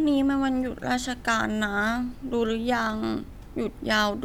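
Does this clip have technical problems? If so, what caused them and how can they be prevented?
No, no technical faults here.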